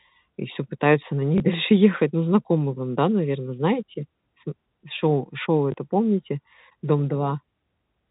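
At 1.38 to 1.40 s and again at 5.72 to 5.74 s, 20 ms of speech is replaced by a copy of the preceding stretch: packet loss with last packet repeated, which fits a single lost 20 ms packet each time. Unlike a dropout, the gap isn't silent but becomes a small blip, heard through the 4 kHz band limit of G.711 telephone coding.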